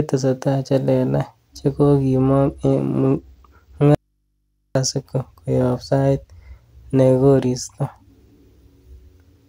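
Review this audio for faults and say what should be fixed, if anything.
From 2.16 to 3.84 s there's a Bluetooth SBC bit pool drop: treble dulls and grit creeps in, which fits the bit pool sliding from 31 to 14, around 99 kbps.

Then from 3.95 to 4.75 s, an audio dropout to a faint residue: the speech cuts abruptly, leaving mains hum about 50 dB down for 0.81 s, likely a lost signal into a still-live path.

To prevent both, keep the Bluetooth link uncongested or switch to a wired connection for recording.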